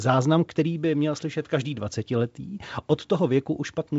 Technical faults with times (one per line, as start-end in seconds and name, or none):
none